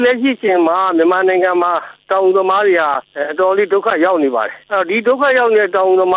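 Nothing is technically wrong with the audio.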